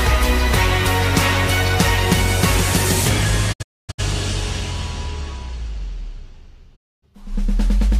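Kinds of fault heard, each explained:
Digital broadcast dropout: from 3.52 to 4.00 s and again from 6.75 to 7.04 s, the receiver stops getting valid frames and mutes, fading out and back in over 20 ms at each edge. The first event is several short holes totalling 384 ms across about 448 ms, the longest 256 ms. The second is a single 256 ms silence. Whatever was broadcast in those gaps is lost, and the hole lengths fit 32 ms frames being discarded.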